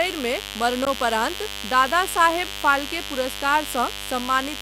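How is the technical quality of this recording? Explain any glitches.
The recording has two technical problems: a constant buzz and one brief dropout.

A mains buzz runs through the whole speech clip. It is based on 50 Hz, with harmonics reaching several kilohertz. Sharp switching spikes from a dimmer, rectifier or poor shielding leak in twice per mains cycle. The result is a steady, raspy buzz, fairly loud, roughly 10 dB below the speech.

At 0.85 s there is a gap between stream segments. The time stamps of two segments, each 2.0 s long, leave a hole of about 14.5 ms. The player fills it with silence. You hear a hard-edged click-like break. No audio is lost.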